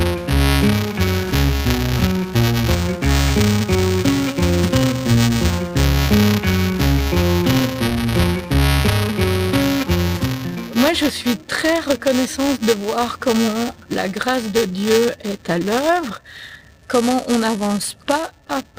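A steady robotic buzz at 345 Hz rides on the sound from start to finish, present whenever there is signal. This is buffer tearing: writer and reader of the playback ring buffer have slipped and cross inside each period, which fits a 128-sample buffer. A small sliver of each buffer, a few percent, holds audio about 5 ms old, with hard joins either side.

Underneath, tiny timing hiccups recur unevenly across the whole clip. That is clock drift between sender and receiver. The sender's clock runs roughly 3 percent slow, so the receiver's jitter buffer keeps draining and has to be fed with extra material.

That feeding is heard as repeated timing corrections from 0.34 to 18.48 s: slightly hesitant, unsteady pacing, as if the sound plays at 98 percent speed. Short pieces are repeated, all in the same direction and unevenly spaced, adding about 0.4 s in total.

Between 5.74 and 10.54 s come scattered short gaps: about seven brief ticks or smears. 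Packets arrived late, and the receiver bridged each hole by continuing the previous sound, the longest patch around 15 ms, roughly 70 ms altogether, with nothing actually dropped.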